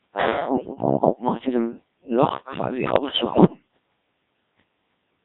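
The speech runs through the Codec 2 vocoder from start to finish, with heavy damage. Its robotic, buzzy character fits the 1.3 kbit/s mode. Only pitch, voicing, energy and a coarse spectral envelope survive, and the decoder rebuilds the voice from sine waves rather than the original waveform. The result is hollow and synthetic, with any non-voice detail mangled.

Bit errors on digital voice radio strike from 0.56 to 0.86 s. Flipped bits, around one in ten, corrupt the frame parameters, so the synthetic voice jumps in pitch and level and breaks into warbling bleeps. A longer burst runs from 2.96 to 3.66 s at a slightly lower error rate. Its length suggests about 18 damaged frames, and it produces sustained robotic gibberish with erratic shifts in tone colour.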